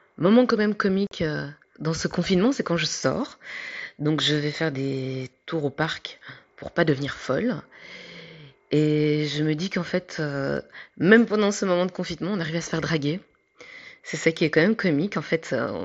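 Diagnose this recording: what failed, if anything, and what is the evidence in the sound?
Unconcealed Bluetooth headset packet loss on the wireless link: a hard-edged 45 ms silent hole cuts the speech from 1.07 to 1.12 s, fitting six lost frames.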